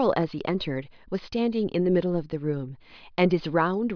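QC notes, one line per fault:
No fault found, so there is nothing to note.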